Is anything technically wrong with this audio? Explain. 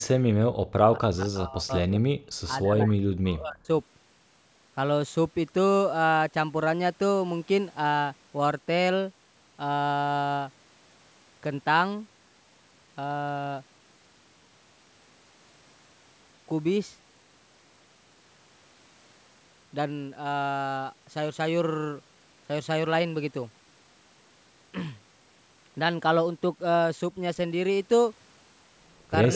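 Yes. Early in the clip, and once at the very end, the sound shows the marks of a hands-free call whose echo canceller is struggling. The sound carries nothing above 8 kHz, which fits the call's microphone processing.

Background gated by the echo canceller: from 0.52 to 0.66 s and again from 2.18 to 2.30 s, the room sound drops out abruptly, by about 33 dB, for a tenth of a second or so. The canceller clamped the microphone while the loudspeaker was playing, then released it.

Speech suppressed in double talk: from 0.94 to 1.90 s and from 2.58 to 3.69 s, the speech sinks sharply, by roughly 40 dB at worst, and breaks up over most of each stretch. The likely cause is both sides talking at once, so the canceller could not tell the near talker from loudspeaker echo and pushed both down.

Echo leak: from 1.90 to 1.99 s, and in the last few hundredths of a second (29.32 to 29.35 s), a faint copy of the speech appears about 159 ms behind the original, well below the main level. 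This is likely loudspeaker sound that the loudspeaker side's canceller failed to remove and sent back.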